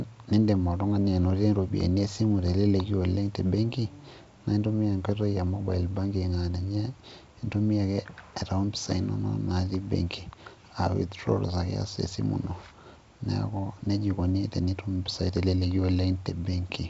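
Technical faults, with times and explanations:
No technical faults can be heard in this speech.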